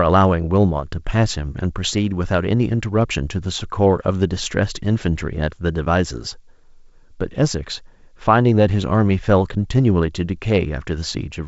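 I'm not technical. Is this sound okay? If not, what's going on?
Yes: no faults; this is ordinary G.722 wideband telephone coding, which carries nothing above 7.7 kHz.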